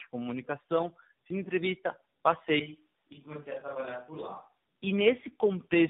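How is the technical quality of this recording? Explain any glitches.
The quality is degraded throughout, with a further dip in the middle.

Tandem speech coding runs the whole length of the recording. The call appears to have crossed several networks, each decoding the speech and coding it again with its own speech codec. The roughness points to about three such coders in a row, each one compressing the errors of the one before. The result is muffled, gritty, warbling speech with nothing above 3.8 kHz.

From 2.60 to 4.64 s there is a switch to a distant microphone. The close microphone's signal most likely dropped out, leaving only a pickup further from the talker. The change is abrupt at both ends. For those two seconds the voice turns hollow and roomy and loses bass, and the level falls by about 10 dB. Faint room noise also rises, though it stays well below the speech.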